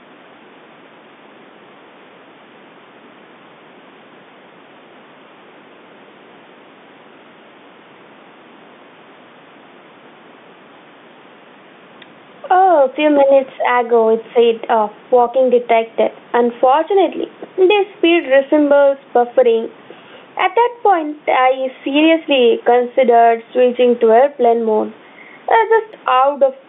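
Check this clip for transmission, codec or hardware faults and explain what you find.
Two faults are audible in the speech: gain pumping running through the whole clip, and a brief burst of bit errors on a digital phone line.

Gain pumping is present from start to finish, with the level swinging by around 10 dB. The likely cause is gain set far too high, with a fast limiter clamping each loud syllable. On a waveform the envelope looks flattened, with the noise floor rising between phrases.

Bit errors on a digital phone line hit at 18.26 s, right after "the speed". Flipped bits on the G.711 line throw individual samples to wrong values. The waveform shows isolated spikes, and the spectrogram shows a thin vertical line spanning the band up to 4 kHz.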